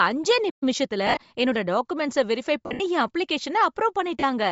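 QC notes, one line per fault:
Throughout, Bluetooth LC3 compression: the speech has a breathy, grainy edge and a dulled top end where upper detail is replaced by noise. This is likely LC3 coding at around 32 kbps in 10 ms frames, zeroing much of the upper spectrum and noise-filling it.
0.49 to 0.63 s, playback stall: the speech cuts out mid-flow into silence for about 120 ms, then resumes where it broke off. The likely cause is the player running out of buffered data, or its thread being blocked, until it recovered.
0.63 to 1.43 s, time-compressed catch-up: the speech just after the stall is hurried at normal pitch, about 1.15 times speed, until "டாகுமெண்ட்ஸ வெரிஃபை". The player is trimming its backlog by removing small slices and cross-fading across the joins.
1.07 to 1.17 s, 2.66 to 2.80 s and 4.20 to 4.23 s, lost LE Audio frames: the speech smears into a noisy wash. In the first, about 80 ms of the stretch is missing, with runs of up to around 40 ms. 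The second comes just after "டாகுமெண்ட்ஸ வெரிஃபை", with about 120 ms missing and runs up to around 70 ms. The last is a brief 30 ms dropout. The decoder conceals each lost frame by repeating the last spectrum with randomised signs, fading it as the loss continues.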